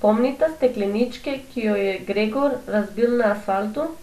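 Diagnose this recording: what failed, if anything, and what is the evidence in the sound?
MP2 compression artefacts run through the whole speech clip, with nothing above 14.2 kHz and a dull, gurgling granularity. The stage is the codec, likely an MPEG Layer II encoder starved of bits, which fits about 80 kbps: upper sub-bands drop out and the remaining bands are coarsely quantised.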